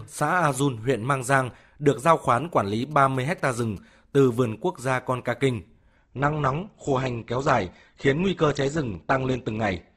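Speech is interrupted between 2.82 and 3.78 s by GSM signalling bursts. A nearby 2G phone is exchanging short radio bursts with its network, and the audio circuitry rectifies them. The result is a galloping run of short 217 Hz buzzes, roughly 30 dB below the speech. From 5.96 s to the end, the adaptive stream drops to a lower bitrate. The connection slowed, so the player switched to a leaner version without any gap. The treble is suddenly cut, with nothing above 8.1 kHz. The sound fits a step from about 64 down to 12 kbit/s Opus.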